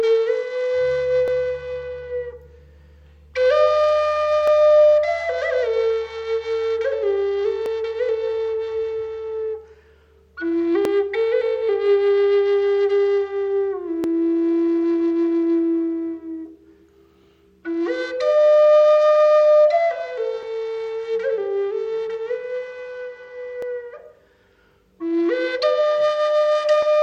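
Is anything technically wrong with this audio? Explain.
Yes. From about 1.28 s to 26.83 s, a regular click or pop interrupts the sound roughly every 3.2 s, about ten times in all. This points to clock drift buffer slips: two devices likely running on separate clocks that disagree by something like 500 parts per million. The buffer between them slowly drifts until a block of samples, on the order of 70, is dropped or repeated, leaving a brief discontinuity each time.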